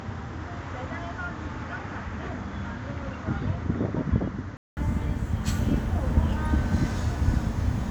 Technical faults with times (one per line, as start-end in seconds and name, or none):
0.00-4.77 input switched to a poorer device